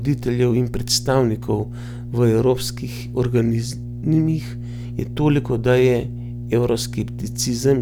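From start to finish, a steady mains hum sits under the speech at 60 Hz, roughly 10 dB below the level of the talker. Power-line current is leaking into the signal path, most plausibly through a ground loop between connected equipment or magnetic coupling from a nearby transformer. It sounds like a constant low drone, unchanged between phrases and through pauses, loud enough to be clearly heard beneath the speech rather than masked by it.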